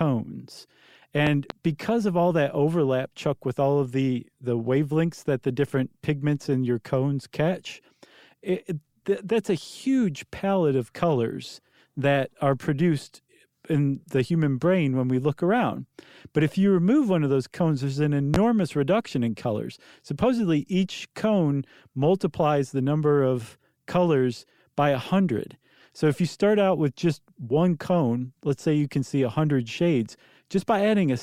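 A loud pop lands twice: a quick pair from 1.27 to 1.54 s before "because of all that", then one louder thump at 18.34 to 18.38 s between "those cones there's an" and "reduction in colors". Likely a voltage pulse; unlike a dropout, speech continues underneath.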